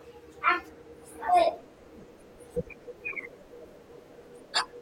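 From the first moment to the last, the speech runs about 1.38 times too fast and sits roughly five and a half semitones high. That's a wrong sample rate: material recorded around 32 kHz is being played back at 44.1 kHz, so everything sounds hurried and chipmunky.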